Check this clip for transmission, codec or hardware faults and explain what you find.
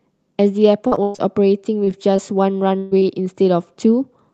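Yes, the clip shows packet loss of three kinds, all heard on a call path whose sound is cut off around 8 kHz, as an Opus coder set to that bandwidth would do.

From 0.87 to 1.20 s there is repeated packet loss with a robotic sound. Four separate gaps open within a third of a second, totalling about 200 ms of lost audio, the longest 114 ms. Each time, the receiver extends the last fragment of sound, so over half of that stretch is synthetic filler. The speech turns choppy, with pieces missing.

Short concealed packet loss occurs three times, starting at 1.84, 2.16 and 3.00 s. Each drops roughly 20 ms of audio that the decoder never received in time. The receiver bridges each hole by continuing the preceding sound, carrying its pitch forward when voiced and substituting shaped noise when not, then crossfading back. Each is a brief smear or wobble, and a quick consonant there may simply disappear.

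From 2.78 to 3.05 s a burst of packet loss removes about 140 ms of consecutive audio. The receiver continues the last sound while steadily lowering its level, stretching the timeline by about 16 ms. That produces a held, fading buzz or hiss in place of the real speech. When normal audio resumes, the section in between is gone, and one of the short dropouts falls near its end.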